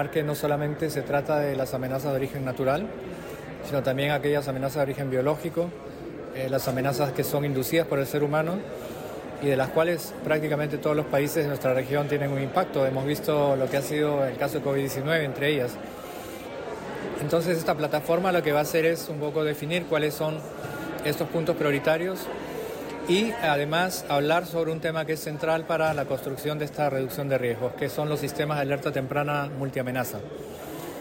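Nothing in this audio stood out as a technical problem on listening.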